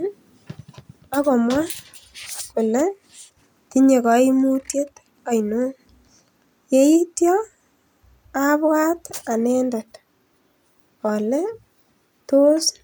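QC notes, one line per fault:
No technical faults were heard in the signal at any point.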